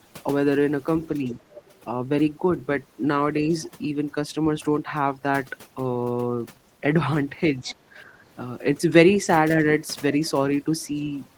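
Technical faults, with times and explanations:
throughout: overdone noise removal. The background drops and breaks up into twinkling specks where quiet frequency bands are cut along with the noise.
1.24–1.37 s, 3.47–3.54 s, 7.59–7.97 s: speech suppressed in double talk. The voice dips by roughly 5 dB in the first two and about 10 dB in the last, likely because the echo canceller turned everything down while both sides spoke.
1.43–1.79 s, 3.62–3.67 s, 7.69–7.75 s: other side's voice leaking through. A faint second voice comes through in scraps, about 20 to 35 dB below the talker, likely loudspeaker echo the canceller missed.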